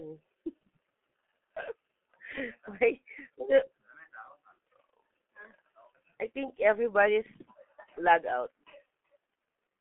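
Speech runs through the G.723.1 codec for the whole clip. Nothing above 3.7 kHz survives, and the line band is roughly 150 Hz to 3.4 kHz, so it sounds muffled. The damage is heavy: consonants blur and the tone turns hoarse, which fits a bitrate near 6.3 kbit/s.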